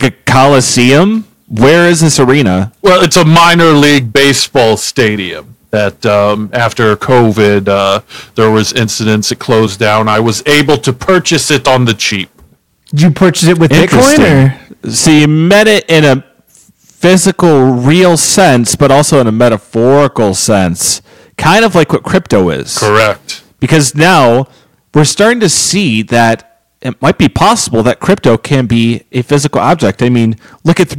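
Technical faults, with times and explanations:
Throughout: hard clipping. The speech is driven about 17 dB past what the signal path can carry, so roughly 7 percent of samples hit the ceiling and are cut flat. Those squared-off peaks generate high harmonics, giving a harsh fuzz on every loud syllable.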